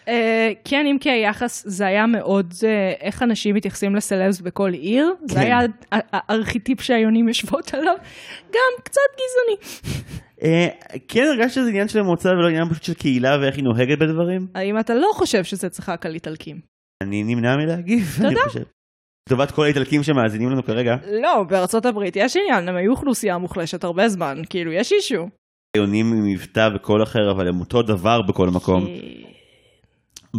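At 16.94 s, 19.21 s and 25.68 s there is a clipped start after a pause. Each time, the output path had gone idle during a short gap of about 0.34, 0.57 and 0.38 s and did not wake quickly enough for the next sound. The first 70, 59 and 66 ms are lost, so speech resumes abruptly from silence without its opening sounds.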